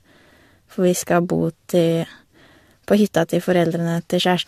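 From start to finish the speech has that swirly, hollow quality, with consonant attacks smeared and a watery shimmer around the voice, all of it worse than a single lossy encode would leave. That's generation loss, likely from the audio going through a lossy codec about three times, each pass requantising on a shifted frame grid so the damage stacks. Nothing sits above 14 kHz, and the texture fits AAC-LC at around 64 kbit/s.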